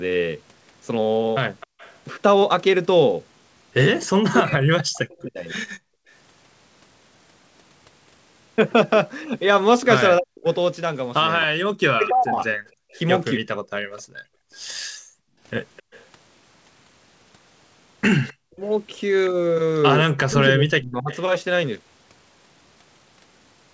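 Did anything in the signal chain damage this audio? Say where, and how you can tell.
Yes. The damage is in the call processing, at the far end's echo canceller.

Echo leak appears at 1.6 to 1.98 s, briefly at 5.22 to 5.3 s, and for a long stretch from 11.42 to 21.21 s. A faint copy of the speech trails the original by 259 ms. It sits about 25 dB below the speech early on and about 20 dB below it in the long stretch. A loudspeaker on the other side is the likely source. Its echo canceller failed to subtract that sound, so it was returned to the call.

Background gated by the echo canceller occurs three times. The room tone collapses by about 37 dB at 1.67 to 1.78 s and by about 36 dB at 5.79 to 6.1 s. It drops again by about 36 dB during 12.7 to 15.4 s, for roughly one and a half seconds in total. Each dip comes while the loudspeaker was active. The canceller clamped the microphone, and the ambience returned when it released.

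Speech suppressed in double talk affects 4.04 to 5.56 s, 10.19 to 13.48 s and 18.42 to 21.11 s. In each span the speech falls away by up to roughly 40 dB, for about a second in total. It dips and breaks into pieces. The likely cause is both sides talking together. The canceller could not separate its own talker from the loudspeaker echo, so it attenuated both.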